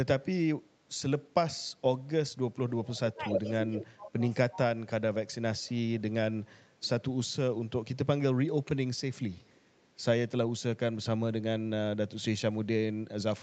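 At 2.69 to 2.86 s a faint echo leak appears: a delayed copy of the speech, trailing by 279 ms and sitting about 25 dB under it, likely because the far end's echo canceller let some of its loudspeaker pickup through. It returns at 3.3 to 3.78 s at roughly the same loudness as the direct speech, and again at 8.97 to 9.86 s, very faint, about 35 dB down. The fixed 279 ms lag is what separates it from room reverberation, which smears continuously rather than repeating the speech as a distinct late copy.

Around it, speech suppressed in double talk shows up twice, at 2.87 to 3.26 s with a dip of around 10 dB, and at 3.72 to 5.9 s with drops reaching about 25 dB, adding up to roughly 1.2 seconds of affected sound. Likely cause: the canceller could not tell the talker from the echo while both overlapped, so it turned both down. Unlike a network dropout, the level sinks in pieces.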